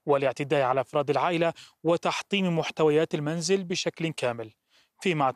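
Just after the start, from 0.96 to 1.01 s, there's a short burst of DAB burbling in the speech. Bit errors, at a few tenths of a percent, slipped past error correction and scrambled sub-band samples across what sounds like a couple of frames, giving quick blips of noise.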